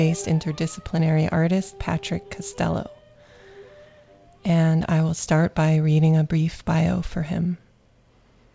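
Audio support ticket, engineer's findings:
No faults found; call audio band-limited at 8 kHz.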